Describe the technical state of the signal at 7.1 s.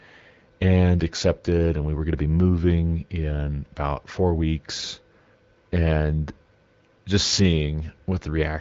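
At 7.1 s the speech is intact, with no fault present, only the ordinary sound of the AMR wideband (HD Voice) path with its bandwidth ending around 7.5 kHz.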